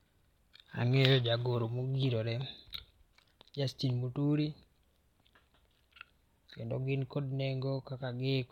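Speech recording, and nothing is technically wrong with it.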